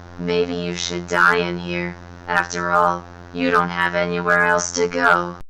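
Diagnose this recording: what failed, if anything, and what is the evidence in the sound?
Nothing in this recording of sounds points to a failure at any stage of the chain. No stage from capture through to playback calls for a diagnosis.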